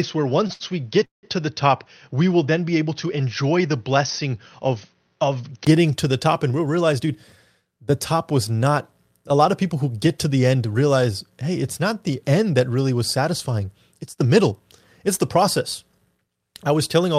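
From 0.0 to 5.67 s the speech sounds dull and a little quieter, likely because the input switched to a poorer device. A spectrogram shows nothing above 6.3 kHz until a brief gap at the switch back.

At 0.47 to 0.52 s and 0.53 to 0.75 s, a short stall from a late packet holds a sound too long. The waveform repeats a stretched cycle instead of a gap.

From 1.05 to 1.26 s comes a call audio freeze, with a fading buzz and then about 140 ms of flat silence in the waveform.

A jitter buffer speed-up from 6.52 to 7.07 s, 11.30 to 12.61 s and 13.92 to 14.52 s hurries the speech by 7 to 10 percent at unchanged pitch. On a spectrogram the harmonics stay level while the syllables sit closer together.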